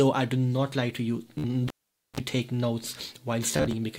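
Bluetooth stutter breaks the sound at 1.38 to 1.44 s, a brief repeating buzz covering about 53 ms of missing audio, which fits roughly four lost packets, and again at 3.51 to 3.73 s, where repeats scatter across about 213 ms with runs up to 27 ms. Between them, from 1.68 to 2.20 s, the cable is pulled and plugged in: a pop, about 474 ms of near silence, a short 60 Hz mains buzz of about 39 ms as contact is made, then a second pop.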